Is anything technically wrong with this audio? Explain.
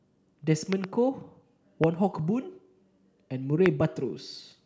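Yes. Loud pops occur three times: a double pop from 0.73 to 0.86 s, then single pops at 1.84 to 1.86 s and 3.66 to 3.68 s. They peak roughly 15 to 20 dB above the speech. A sudden voltage pulse, likely from a switch, plug or static, is added to the signal. The speech continues underneath.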